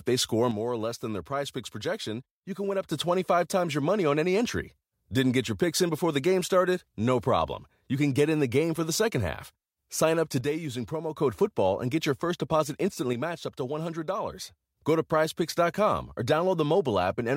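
Right after "they score" the speech level drops abruptly by about 6 dB from 0.51 to 2.91 s, again from 10.41 to 11.16 s, and after "get your first deposit" from 13.13 to 14.77 s. That's likely one channel dropping out before the mono sum.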